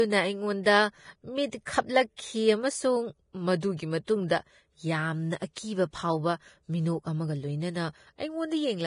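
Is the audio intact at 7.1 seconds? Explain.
No. At 7.1 seconds the speech carries heavy damage that runs through the whole clip, likely from Vorbis compression. Nothing sounds above 10.5 kHz. The coarsely quantised treble turns into hiss and grain, which points to a bitrate near 30 kbps. Attacks blur and tones roughen.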